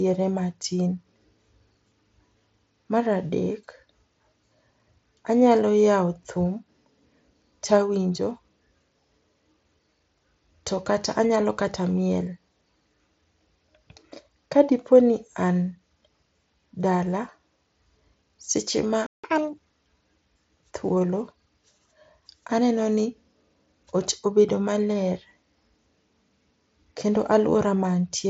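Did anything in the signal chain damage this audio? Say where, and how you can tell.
Yes. A playback stall at 19.06 s cuts the speech dead for about 0.17 s, likely a player buffer running dry or a blocked output thread.

Catch-up at higher speed follows from 19.24 to 19.58 s. The player resamples its backlog at 1.5 times speed, lifting pitch about seven semitones before it settles back.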